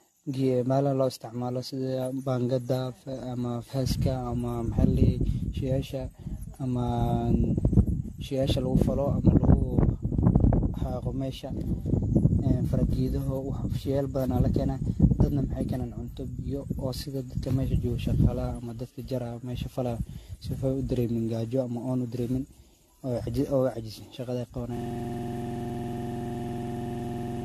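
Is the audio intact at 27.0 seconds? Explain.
No. At 27.0 s the clip is inside a system hang loop that runs from 24.77 s to the end. With the host frozen, the hardware kept replaying one 46 ms slice, which fits a 2048-sample buffer, dozens of times. It sounds like a 21.5 Hz machine-gun buzz, and the waveform shows identical blocks tiling evenly.

Generation loss also colours this moment. The sound is swirly, hollow and smeared, with blurred attacks, most likely from around ten passes through a 64 kbit/s AAC-LC encoder. On a spectrogram nothing rises above 14.1 kHz, and flickering holes pock the upper bands.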